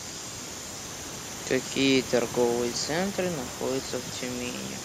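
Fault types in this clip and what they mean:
No technical faults are present.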